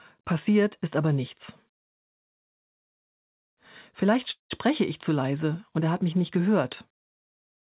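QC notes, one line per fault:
4.31–4.52 s, call audio freeze: the sound halts, its last instant carries on as a brief fading buzz, then about 140 ms of silence follows before playback resumes from the exact point it stopped, shifting everything after by about 0.19 s with nothing lost. The likely cause is a jitter buffer running empty while packets were delayed. The spectrogram shows the final slice smeared sideways into a blank column below the 4 kHz call-path ceiling. The waveform shows a decaying envelope, then a flat line.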